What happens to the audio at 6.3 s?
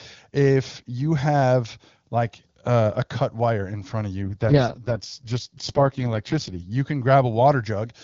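An AMR rate drop runs from 4.24 to 6.71 s, after "wire in front of": the link forces AMR-WB from 23.85 to 6.6 kbit/s, so speech turns rough and synthetic without any gap.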